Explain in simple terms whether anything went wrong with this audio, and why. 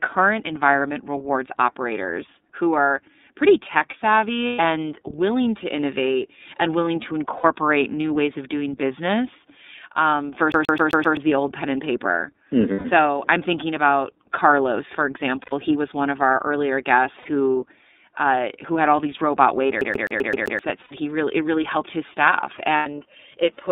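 The whole recording went through the iLBC codec, a phone-call voice codec. It keeps only the band from 200 Hz to about 3.7 kHz, so the speech sounds thin and muffled. Each 30 ms chunk is squeezed hard, which makes the voice sound rough and slightly robotic.

There are also seven short dropouts, which are lost iLBC frames. They fall at 4.47 s (between "who are pretty tech" and "willing to innovate and"), 7.37, 12.73, 15.43, 17.20, 20.82 and 22.77 s. Each lasts 60 to 120 ms. The player fills each gap by repeating the last bit of voice, so you hear a brief buzzy hum. Then the speech snaps back.

Twice the audio sticks like a CD stuck on one turn. The first time is 10.52 to 11.17 s, after "of doing business um" and before "the old pen and". The second is 19.81 to 20.59 s, after "had all these robot". Each time, a 130 ms scrap repeats five or six times in a quick, even stutter, like a scratched disc skipping back.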